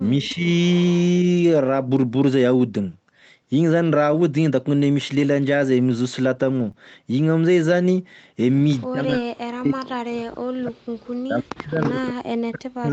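From 0.19 to 0.46 s the speech dips by about 10 dB, which points to speech suppressed in double talk: the echo canceller likely failed to separate the near talker from loudspeaker echo and attenuated both. Overlapping it, from 0.23 to 0.34 s and again from 0.67 to 1.03 s, an echo leak returns a faint copy of the sound 310 ms late, about 20 and then 25 dB down. That fixed lag is what separates it from reverberation.

Lost packets rebuilt from error correction occur at 2.11 to 2.13 s, 5.15 to 5.25 s, 6.35 to 6.69 s and 9.09 to 9.15 s. The decoder substitutes low-bitrate copies carried in the following packets, so nothing drops out, but those stretches turn rough and noisy. There is no extra loss of treble, since the call already stops at 8 kHz.

At 6.71 to 6.75 s a short concealed packet loss is different: about 20 ms never arrived and was synthesised from the preceding sound, giving a brief smear or wobble rather than roughness.

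The echo returns, 310 ms late, at 8.80 to 8.87 s (about 35 dB down) and 11.81 to 11.91 s (about 15 dB down). Double-talk suppression also cuts the speech by up to about 40 dB from 8.88 to 10.88 s and again from 11.24 s to the end, producing deep fades instead of added sound.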